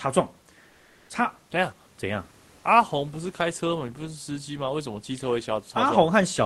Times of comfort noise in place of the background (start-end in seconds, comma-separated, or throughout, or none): 0.69-1.09